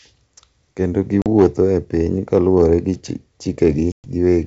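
Packet loss on an ADPCM call first hits at 1.22 to 1.27 s, where a 40 ms hole, about a couple of packets' worth, drops the speech to dead silence with hard edges. The receiving decoder's adaptive predictor and step size lose track of the sender's during the gap, so the speech comes back slightly distorted before it settles.

Hard clipping follows at 1.38 to 1.60 s, with the signal driven about 5 dB past what the chain can pass. Its peaks are sheared flat, adding high harmonics heard as harsh crackle on the louder moments. A milder stretch at 2.36 to 2.74 s, overdriven by only about 1 dB, flattens just the tallest peaks, leaving crackle on those peaks rather than fuzz.

Packet loss on an ADPCM call returns at 3.92 to 4.08 s, now a 120 ms gap spanning several packets. Again the decoder's prediction falls out of step with the sender's, so the speech returns slightly distorted before it recovers. 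Through the G.722 wideband path, sounding consistent with 64 kbit/s operation, the speech stays clear up to 7 kHz.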